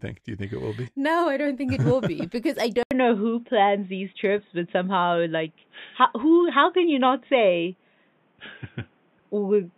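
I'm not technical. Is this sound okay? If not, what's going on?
No. At about 2.83 s, right after "because I", there's a brief gap of about 80 ms, and from then to the end the sound turns dull and boxy, with nothing above 3.8 kHz. It also shifts a little in loudness and gains a faint new background hiss. That points to an input switched to a poorer device, most likely another microphone or a headset. Simple muffling wouldn't bring the gap, jump in loudness and new hiss all at once.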